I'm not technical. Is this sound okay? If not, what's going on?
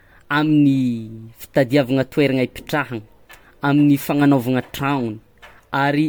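No. Throughout, the speech sounds swirly, hollow and smeared, with blurred consonants: generation loss, likely from being re-saved as MP3 about ten times over.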